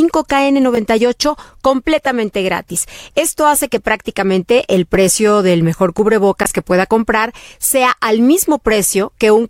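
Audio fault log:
6.43–6.46 s, Bluetooth stall: Radio interference likely held back packets on the wireless link, so the headphones' small playback buffer ran empty and output paused until the resent data arrived. In the speech, just after "el precio del mejor", the sound drops to silence for about 15 ms, then resumes, leading into "que pueda comprar sea". The result is a brief hole in the audio.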